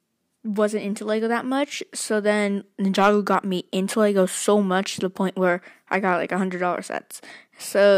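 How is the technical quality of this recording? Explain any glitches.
One glitch stands out: a corrupt frame decoded at 6.53 s. Bits inside a single compressed frame were damaged, yet the decoder still played it, so misread gains or codes put energy at the wrong frequencies for that frame's brief span. It comes through as a short, quiet chirp, squeak, blip or burst of noise peaking around -35 dBFS. Unlike a plain click from a sample discontinuity, it comes from misdecoded frequency content rather than a jump in the waveform.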